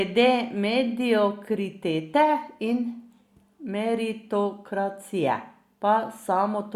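Nothing in this speech recording stands out as a technical fault, so there's no moment to point to and no problem to describe.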